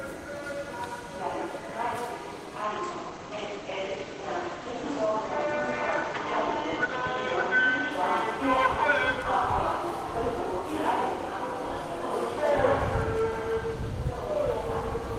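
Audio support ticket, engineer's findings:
Call bitrate drop, 2.65 to 7.97 s. Bandwidth estimate collapsed; encoder forced onto far fewer bits. Drop sounds like roughly 32 kbps falling to about 14 kbps, with the low point held for about 4.8 s. Probable component: Opus encoder rate control. Effect: audio band cut from 20 kHz down to 8 kHz, so the sound turns muffled, with rough, watery coding texture until the bitrate climbs back near 7.97 s.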